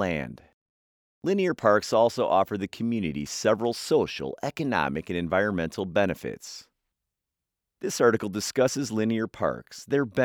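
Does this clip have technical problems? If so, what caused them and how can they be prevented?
No, there are no technical faults to be heard in this speech recording. With nothing going wrong, there is no cause to trace and nothing that needs preventing.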